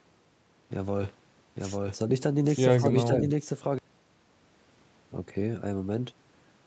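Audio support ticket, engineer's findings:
Doubled audio track, 1.56 to 3.78 s: full-band repeat of the speech at about the original level, trailing by roughly one second, dry, no decay, abrupt onset and cutoff. Likely a slower second capture path or an edit holding two out-of-step copies.

Speech suppressed in double talk, 2.79 to 3.10 s: talker dips in pieces, deepest about 10 dB, roughly 150 ms affected in total, while the other side is talking. Likely echo canceller unable to separate near-end speech from loudspeaker echo, attenuating both.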